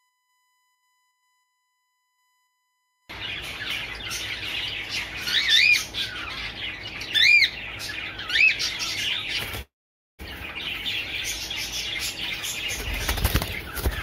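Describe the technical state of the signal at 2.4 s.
At 2.4 s the signal carries USB whine, present from 0.0 to 5.63 s: a steady 1 kHz tone, roughly 45 dB below the programme, leaking in from the bus's 1 ms frame current. A spectrogram shows a thin, unwavering horizontal line at 1 kHz; the waveform looks unchanged.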